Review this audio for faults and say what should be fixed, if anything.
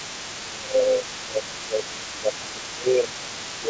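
From the start to the end at 3.7 s, the other side's voice is leaking through: a second, fainter voice sits roughly 20 dB below the main talker, most likely loudspeaker playback that the echo canceller left in the microphone signal. Unlike background chatter in the room, it is present for the whole clip and carries the same band limit as the rest of the call, which ends at 8 kHz and fits a G.722 path. To prevent it, improve echo cancellation or use a headset so the far end never reaches the microphone.

From 0.44 s to the end, the speech is suppressed in double talk: the main voice dips by as much as about 15 dB while the leaked voice is also present. The likely cause is the echo canceller failing to tell the talker from the echo and turning both down. Unlike a dropout or packet loss, the dips follow the overlap with the other voice. To prevent it, tune the canceller's double-talk detection so it stops attenuating the near-end talker while the far end is playing.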